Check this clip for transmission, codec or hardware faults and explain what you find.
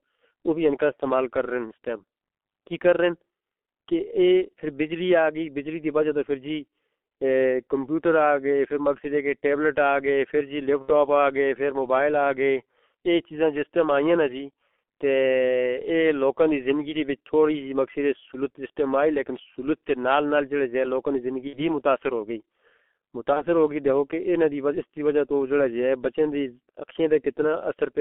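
Two faults are present: heavy speech-codec damage throughout, and three short dropouts concealed by the decoder.

G.723.1 codec, throughout: the audio sits in a 250 Hz to 3.4 kHz band. Its muffled, hoarse sound and blurred consonants fit a 6.3 kbit/s coder.

VoIP packet loss concealed by the speech codec, at 10.82–10.91, 21.47–21.65 and 23.33–23.43 s: the decoder fills each gap from its last pitch and filter, producing a fading smear. The first two fit about 60 ms lost, the third about 30 ms.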